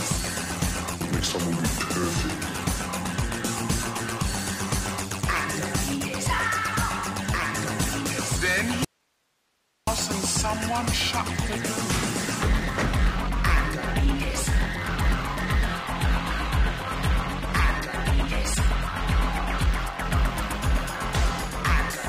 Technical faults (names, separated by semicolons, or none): audio dropout to a faint residue; adaptive stream at a lower bitrate